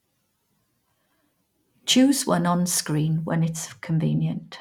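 From 3.30 s to the end at 4.61 s, the speech turns dull and muffled. This is de-emphasis applied wrongly. A treble cut meant to reverse pre-emphasis was used where no boost existed, or was used a second time. The high end rolls off smoothly, with no sharp edge. At 10 kHz the level sits about 10 dB below 1 kHz. Consonant detail and air fade. The sound seems to come through a cloth.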